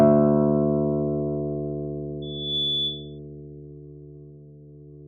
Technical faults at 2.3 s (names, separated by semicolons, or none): loudspeaker feedback squeal